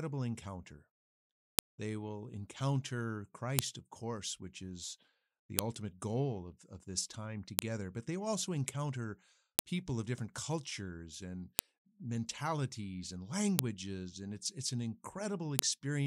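A sharp snap hits every 2 s, at 1.59, 3.59, 5.59, 7.59, 9.59, 11.59, 13.59 and 15.59 s, including right after "will encounter". That's a file header played as audio: each 2 s piece kept its header bytes, which play back as a loud click.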